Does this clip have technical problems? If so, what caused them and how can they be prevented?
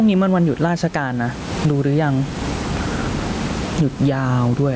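Yes. Gain pumping runs through the whole clip. The room noise is about 30 dB below the speech. The swing is around 20 dB. The likely cause is input gain set far too high, with a fast limiter clamping every peak. Lower the microphone gain so the limiter rarely has to act.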